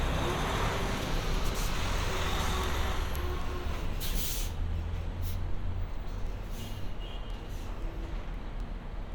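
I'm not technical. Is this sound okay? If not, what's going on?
No. Two pieces of equipment passing the audio digitally are each keeping their own time, and their clocks don't quite agree. Every time the gap adds up, the receiving device skips or doubles a single tiny slice of the sound. This is called word clock ticks. You hear it as sharp clicks of uneven strength at a steady pace, roughly three times a second, from about 0.3 s right through to 9.1 s, around forty in all.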